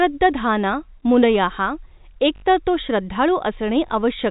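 At 2.36 to 2.42 s, just before "तर तो", packet loss with the last packet repeated leaves a 60 ms gap, filled by replaying the same short stretch of audio. It sounds like a brief robotic stutter with a 50 Hz buzz, which fits 20 ms packets. The waveform shows identical repeating blocks. A single 20 ms repeat follows at 3.88 to 3.90 s. Above it, the G.711 telephone band stops at 4 kHz.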